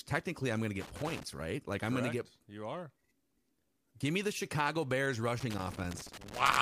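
Loose connector crackle breaks into this speech clip twice, from 0.81 to 1.23 s and again from 5.40 s through to the end at about 6.6 s. Each stretch is an irregular burst of scratching, the sound of a worn or dirty contact making and breaking as it shifts, chopping the signal. Its ragged, uneven timing separates it from digital clicks or dropouts, which land as clean, isolated breaks.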